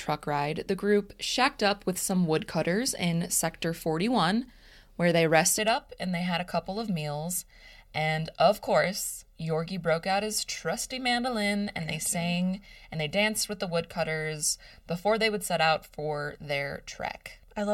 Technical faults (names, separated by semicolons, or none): channel delay (comb filtering)